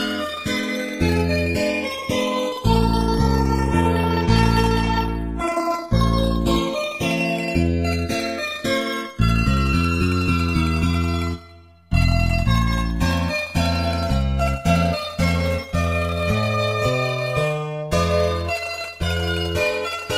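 Throughout the audio the channels drift apart: the two sides run on separate clocks about 150 ppm apart, so their offset grows steadily to roughly 2 ms. In mono, comb notches glide one way as slow flanging, unlike a static comb or an oscillating flanger.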